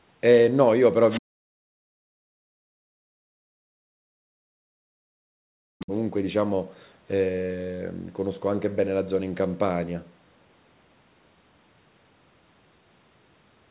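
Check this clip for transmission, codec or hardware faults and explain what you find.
Two echo-canceller faults are present in this speech clip, heard over a narrowband path whose sound stops near 4 kHz, which fits G.711 mu-law.

Other side's voice leaking through, 1.1 to 1.2 s and 5.8 to 5.86 s: likely incomplete echo cancellation lets faint scraps of a second voice through, well below the talker.

Speech suppressed in double talk, 1.2 to 1.91 s and 2.48 to 5.92 s: during simultaneous talk the canceller likely ducks everything, so the voice drops steeply, by roughly 40 dB, and breaks up.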